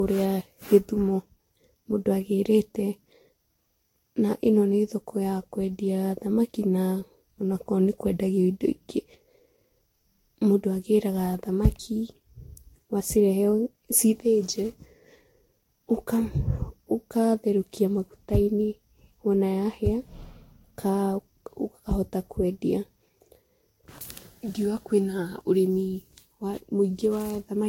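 Throughout the speech, the audio was likely decoded and re-encoded about seven times with a lossy codec whose character fits Vorbis at around 64 kbit/s. This is generation loss: each pass stacks fresh quantisation noise, leaving a swirly, hollow, smeared sound with blurred attacks and nothing above 16.6 kHz.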